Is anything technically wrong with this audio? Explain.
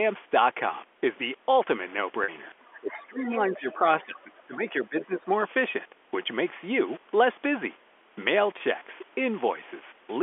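Yes, three kinds of fault occur in this speech clip, heard over a telephone band of 300 Hz to 3.4 kHz.

Packet loss with pitch repetition occurs at 2.24 to 2.28 s, a 40 ms gap consistent with two lost 20 ms packets, and at 8.58 to 8.60 s, a single 20 ms gap. The receiver repeats the last pitch period to fill each gap, so the sound briefly holds and buzzes. On a waveform this shows as identical repeating cycles, and on a spectrogram as frozen harmonic lines.

The other side's voice leaks through from 2.6 to 3.02 s. It is a second voice about 25 dB below the main speech. The likely cause is far-end audio from the loudspeaker that the echo canceller failed to remove. On a spectrogram it appears as faint, unrelated harmonic traces beneath the main speech.

Speech is suppressed in double talk from 2.8 to 3.85 s, with the level dipping by up to about 20 dB over roughly 0.7 s in total. It happens again from 4.04 to 5.3 s, with dips of up to about 15 dB over roughly a second. 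The likely cause is the echo canceller turning the talker down while the far side was also speaking. The waveform shows the envelope dipping in patches.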